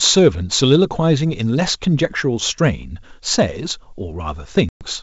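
Speech, carried over G.722 wideband coding that stays clear to about 7 kHz, suffers packet loss on an ADPCM call from 4.69 to 4.85 s: around ten packets, roughly 120 ms, drop into hard-edged silence, and the desynchronised predictor brings speech back slightly distorted.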